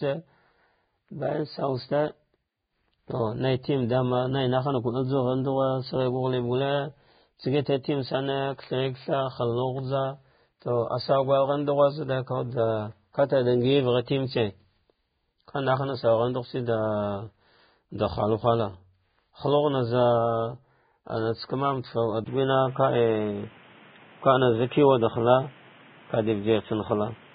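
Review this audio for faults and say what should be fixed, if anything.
Throughout the recording the speech is hissy and grainy, with nothing above 4.9 kHz, roughened tones and smeared consonant onsets. The likely cause is heavy Vorbis compression at a very low bitrate, around 15 kbps. The encoder lowers its cut-off and quantises the remaining treble so coarsely that fine detail turns into noise of similar energy. It differs from a device change because the damage is constant from start to finish, with no step anywhere. To prevent it, encode at a much higher Vorbis quality setting or keep a lossless copy.

At 22.24 s, after a 20 ms gap, the sound changes for the rest of the recording. The band narrows to nothing above 3.8 kHz, the level shifts by about 5 dB, and a new background noise appears, about 30 dB below the speech. This is most likely an input switched to a poorer device, one that passes a narrower band and has its own tone and noise floor. 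Unlike codec loss, it begins abruptly at one moment, with the brief silence marking the changeover. To prevent it, lock the recording input so the system cannot switch devices mid-session.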